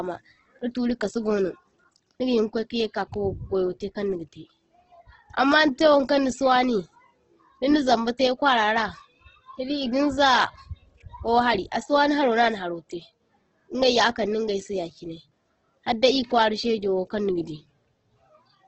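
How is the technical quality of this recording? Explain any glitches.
The recording is heavily degraded by lossy compression throughout the speech. Nothing survives above 8.2 kHz, so the top end is missing and the voice sounds dull. The remaining bands come across rough and grainy, with a noisy texture on sustained sounds but little of the hollow swirling typical of MP3. The likely cause is Opus compression in its music (CELT) mode at a very low rate, which fits a bitrate around 12 kbps. When bits run short, the encoder preserves each band's overall energy but fills its fine detail with folded or noise-like content, and the narrowed wideband range accounts for the cut-off.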